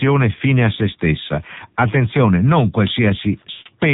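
The whole clip runs through the AMR narrowband mobile codec; everything above 4 kHz is gone and the speech sounds buzzy and synthetic, which fits a low mode around 7.4 kbps. At 3.52 s there's a run of lost AMR speech frames: the decoder stretches the last sound, fading it out over roughly 140 ms until 3.67 s, about what seven missing 20 ms frames would give.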